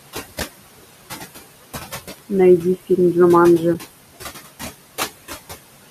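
Throughout the speech there are noise suppressor artifacts: the room noise is pulled down by about 18 dB between words and rises again beneath them. At 0.40 s and 3.74 s, AAC frame loss with muting leaves brief 10 ms dips. That length fits a single low-delay frame that the decoder zeroed and the overlapping windows faded out and back in.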